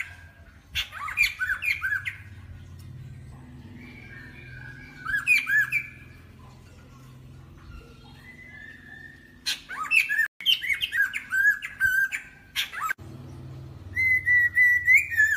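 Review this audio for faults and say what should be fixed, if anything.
At 10.26 s the sound cuts out mid-flow and stays silent for about 0.14 s, resuming at 10.41 s. This is a playback stall: the gap is abrupt and no sound is lost around it, just held back. The likely cause is the player's buffer running dry, or its output thread being blocked long enough that nothing reached the device for those 141 ms. Preventing it means keeping a deeper playback buffer and running audio output on a high-priority thread.

Right after the gap, from 10.41 to 10.97 s, the audio runs noticeably fast and sounds raised in pitch by roughly four semitones, before settling back to normal. This is catch-up at higher speed: having fallen behind during the stall, the player resamples its backlog at 1.25 times normal rate, so speed and pitch rise together until the lost time is recovered. It should be fixed by using pitch-preserving time-stretching for catch-up, or by spreading the correction more gently.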